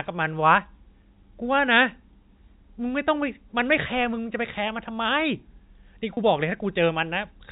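At 6.14 s the stream dropped roughly 30 ms of speech, which fits three lost 10 ms packets, and the receiver covered the hole with packet loss concealment by pitch repetition: it kept replaying the last pitch period it had received until fresh audio arrived at 6.17 s. Because the gap is so short, the repetition never fades to silence. The speech simply seems to stall on a slightly held, buzzy tone for an instant before carrying on, heard through the narrow band of G.711 telephone coding.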